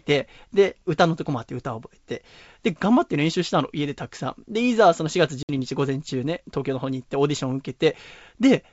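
At 5.43 s, packet loss on an ADPCM call drops around seven packets, putting the decoder's predictor out of step: a hard-edged 60 ms silence, then briefly disturbed speech at 5.50 s.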